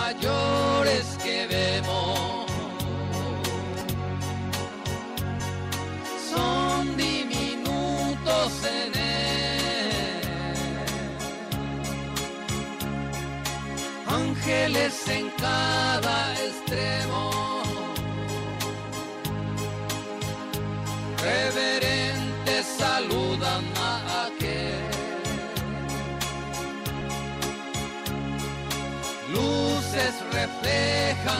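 Compressed frames skipped at 3.81–3.85 s, 5.39 s, 24.69 s and 27.01 s: whole blocks of encoded audio never reach playback, so the sound lurches forward. The jumps are roughly 200 ms, 100 ms, 100 ms and 70 ms, which fits several 20 ms frames dropped each time.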